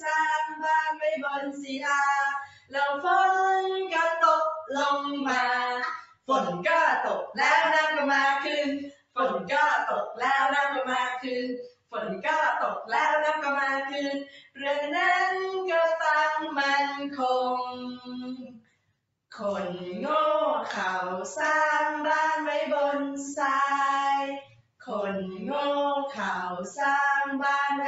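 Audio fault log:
Throughout – noise suppressor applied to music or sounds: a speech-tuned suppressor stays on the whole time and treats anything steady, like held tones, ambience or reverb, as noise to pull down. The level keeps shifting by a few dB, so sustained parts sink and swell while attacks punch through, and the sound pumps and thins. The top end stopping around 8 kHz is just the call path's normal bandwidth, not part of this.
2.45–2.75 s, 6.0–6.29 s, 8.9–9.17 s, 11.68–11.94 s, 14.25–14.6 s, 18.43–19.31 s, 24.42–24.88 s – sound cut by the noise suppressor: in these spots the suppressor decides the sound is noise and clamps hard, by about 15 dB in the first one and about 21 to 22 dB in the rest. Most dips last around a third of a second, but the one at 18.43 s runs for most of a second. You hear a sudden hole where the sustained sound or its decay should be.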